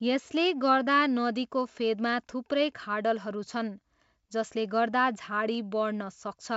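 Speech, with no technical faults to report. It has been carried through G.722 wideband telephone coding at 64 kbit/s, which keeps content up to about 7 kHz and leaves at most a faint trace of the coding.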